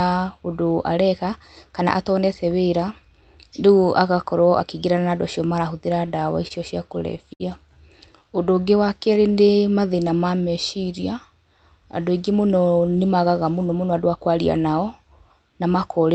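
Speech carried over a WebRTC call path, with the high end rolled off above 8 kHz as an Opus link at about 32 kbps would do, shows four jitter buffer faults. From 5.95 to 6.52 s, packets kept arriving late and the buffer ran dry four times. The receiver held the last sound for 58 ms in all, the longest wait being 27 ms, so the speech stutters without losing anything. At 7.33 to 7.42 s a single late packet caused a short stall. The buffer emptied, its delay grew by 64 ms, and the receiver stretched the sound across that gap, leaving one sound held too long with a slight buzz or dip. From 8.12 to 10.52 s a jitter buffer slow-down rebuilt the buffer's reserve by repeating pitch periods and slivers of pauses, adding 184 ms. Speech plays at 93% speed at unchanged pitch and sounds drawn out. Right after "andũ aingĩ", from 12.36 to 14.16 s, a jitter buffer speed-up trimmed excess delay by removing short pitch-period pieces, about a fifth of a second in total. 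Speech runs at 111% speed at the same pitch and sounds hurried.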